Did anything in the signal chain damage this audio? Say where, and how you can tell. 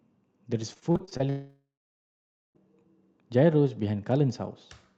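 Yes, the damage happens on the network side of the call path. The Opus stage itself is working, and the audio's top end stops around 8 kHz.

Repeated packet loss (robotic sound) runs from 0.73 to 1.21 s. The speech turns choppy there, with seven short holes, the longest about 36 ms. About a third of that half-second is patched over. Each time a packet fails to arrive, the receiver stretches the previous sound to fill the gap, and the next loss follows almost at once, so the stretched fragments stack into a choppy sound with pieces missing.

From 1.29 to 2.57 s there is a 1.27 s stretch where the audio stops. A fading buzz or hiss continues the last sound, then roughly 0.86 s of silence follows before speech resumes with that section gone. This is most likely a long network dropout. Nothing arrived for over a second, so the receiver extrapolated briefly, gave up, and output silence until the stream came back.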